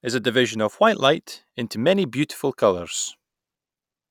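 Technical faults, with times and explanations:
1.15–4.10 s, sample clock jitter: just after "a division of white" the converter clock starts wobbling by roughly 1.5 µs, so samples land slightly early or late. Loud, bright speech gets a gritty hiss about 40 dB down that disappears in pauses.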